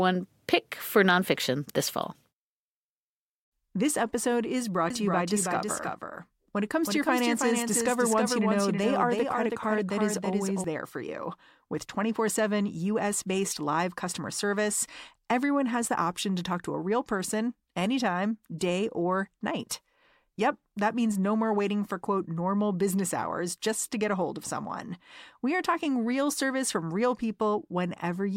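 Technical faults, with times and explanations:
4.90–10.64 s, doubled audio track: a second, full-band copy of the speech runs roughly 300 ms behind the original at about 5 dB lower, with no reverb tail or room colouring. It switches on and off abruptly at both ends. The likely cause is a slower second capture path or an edit leaving two copies out of step. On a spectrogram every syllable's pattern repeats as a fainter duplicate shifted right. The waveform shows each burst echoed by a smaller twin.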